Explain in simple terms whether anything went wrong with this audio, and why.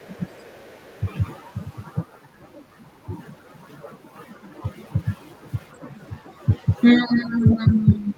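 Two things went wrong, and both most likely come from the echo canceller, the part of a call system that stops the other person's voice from the loudspeaker being picked up again by the microphone.

The first is the other side's voice leaking through. The echo canceller did not fully remove what the loudspeaker played, so a faint second voice slips in behind the main speech. It is very faint from 0.0 to 0.1 seconds, still faint from 0.31 to 1.06 seconds, and a little more noticeable in a brief scrap from 7.42 to 7.47 seconds.

The second is speech suppressed in double talk. When both people spoke at once, the echo canceller could not tell the talker apart from the echo and turned everything down together. The talker's voice drops sharply for a short moment from 0.16 to 0.23 seconds. It sounds noticeably quieter from 6.98 seconds until the clip ends at about 8 seconds.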